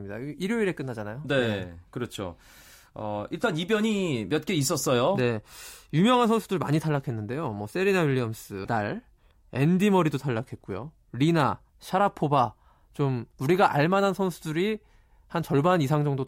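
A speech recording with one brief disturbance from 8.64 to 8.67 s, where the audio skips forward and the next moment comes out garbled. The likely cause is a broken MP3 bit reservoir: after frames of about 26 ms were lost, the following frame decoded its borrowed bits from the wrong data.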